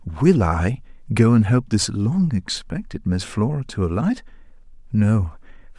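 No faults turn up anywhere in this speech recording, so there's nothing to point to along the way.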